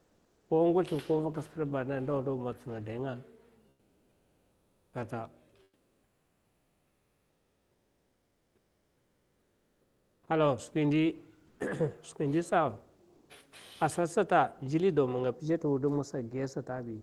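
From 0.0 to 0.49 s, 3.69 to 4.93 s, 5.63 to 10.27 s, 11.47 to 11.59 s and 13.15 to 13.29 s, comfort noise replaces the background during pauses, likely from discontinuous transmission. The real room tone becomes a smooth, featureless hiss. In the longest gap it sits about 9 dB quieter, and on a spectrogram it shows as flat, texture-free noise.

From 10.23 to 10.27 s the onset is likely clipped by the voice detector, losing about 40 ms. The sound snaps in abruptly, and the waveform jumps straight in with no gradual rise.

From 15.35 s to the end, channel delay causes comb filtering. One channel lags by a fraction of a millisecond, which gives a hollow, phasey tone with evenly spaced notches on the spectrogram, the first around 3 kHz.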